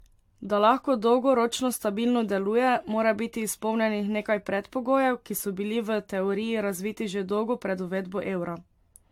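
From start to finish the speech has that swirly, hollow, smeared quality you get from generation loss. It was most likely run through a lossy codec around seven times over, the character fitting AAC-LC at 96 kbit/s. Each re-encode quantises on a shifted frame grid, so the noise and spectral holes stack up, and consonant attacks go soft and blurry. Nothing comes through above 19.2 kHz.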